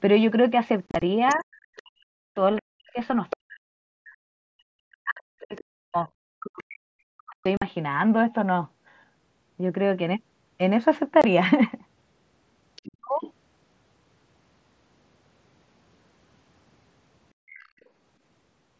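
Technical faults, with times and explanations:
0.87–1.02 s, 7.57–7.62 s and 11.22–11.24 s: unconcealed Bluetooth headset packet loss. The speech has sharp-edged holes. Around 0.9 s, about 90 ms goes missing in pieces across 150 ms, the longest gap 30 ms, so it sounds like a rough crackle. The later holes last 45 ms and 22.5 ms. These are fixed-size gaps that ignore what else is happening, which fits lost 7.5 ms headset packets left as silence rather than smoothed over. The echo-related dips below rise and fall with the far-end voice instead.
1.28–3.36 s, 5.4–7.47 s, 12.76–12.87 s and 17.47–17.82 s: other side's voice leaking through. A second voice sits under the talker. It is about 15 dB below the speech in the first stretch, about 25 dB in the second, and about 30 dB in the last two brief scraps. It is likely loudspeaker output that the echo canceller left behind in the microphone. It is a separate voice layered on top, not a dropout in the talker's own speech.
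1.35–7.45 s and 12.84–13.11 s: speech suppressed in double talk. While the leaked far-end voice is present, the talker's speech sinks and chops, at worst by about 40 dB. Roughly 5 s of the first span is affected. The later span dips by about 30 dB over about 0.2 s. The likely cause is the canceller ducking both voices when it cannot separate them. The attenuation follows the other voice, unlike the abrupt fixed-length holes of packet loss.
17.34–17.8 s: background gated by the echo canceller. The room sound itself drops away, by about 33 dB for roughly 0.3 s, then returns once the canceller releases. It coincides with the far-end scrap at 17.47 s, but here the ambience between words is pulled down rather than the talker's speech. That separates it from double-talk suppression and from the hard-edged gaps of lost packets.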